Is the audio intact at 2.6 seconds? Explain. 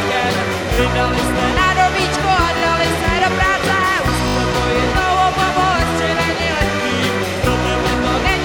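No. From 2.58 to 2.62 s a brief buzzing stutter is heard. One tiny slice sounds three times with a hard join at each repeat, which fits a 20 ms buffer. This is a repeated buffer: fresh audio arrived late, so the device replayed its last block twice, losing essentially nothing.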